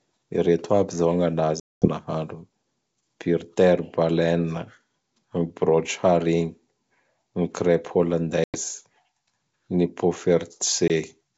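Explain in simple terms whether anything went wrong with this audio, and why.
Packet loss on an ADPCM call breaks this speech three times: at 1.60 to 1.88 s, at 8.44 to 8.57 s, and briefly at 10.88 to 10.91 s. Each gap is a hard-edged silence where chunks of the call never arrived, about ten, five and one in turn. Because this coding predicts each sample from the last, the receiver loses track during a gap, so the speech comes back slightly distorted before settling.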